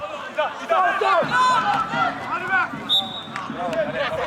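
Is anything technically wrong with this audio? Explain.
No, nothing is technically wrong with this audio.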